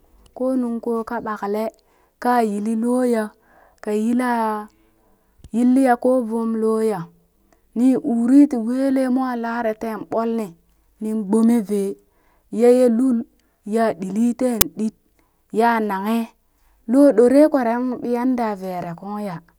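An uninitialised buffer fault hits this speech recording at 14.61 s as a single short, loud crack. A 10 ms block reached the output before any audio was written into it, so whatever values sat in that memory were played back as samples.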